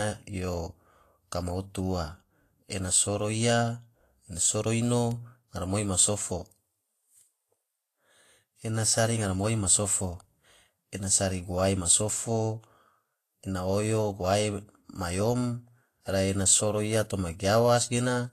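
From start to finish the speech has a hissy, grainy treble, with attacks smeared and nothing above 14.2 kHz. That's likely Vorbis compression at a low setting, which fits something around 33 kbps: the codec trades fine high-frequency detail for noise of similar energy.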